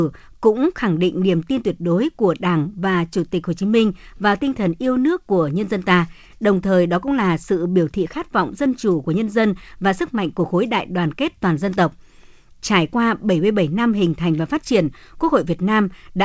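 No technical faults are audible.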